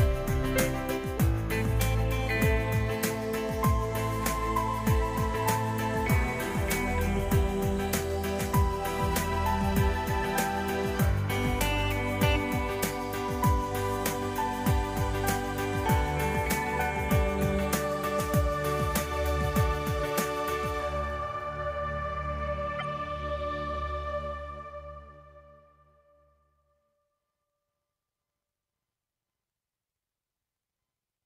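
At 17.41 s and again from 22.79 to 22.82 s the audio carries short spurious blips, the signature of a corrupt frame decoded. Flipped bits in the compressed stream led the decoder to apply wrong gains or misread spectral codes, placing energy at frequencies unrelated to the surrounding material. The first event spans a few frames and peaks around -30 dBFS. The second covers a couple of frames and is louder, near -20 dBFS.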